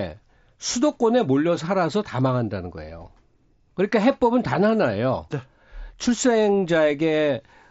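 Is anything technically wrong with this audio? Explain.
No, nothing is technically wrong: the speech comes through a Bluetooth mSBC headset link whose wideband response reaches up to 8 kHz, with only the light graininess on louder passages that this codec normally leaves.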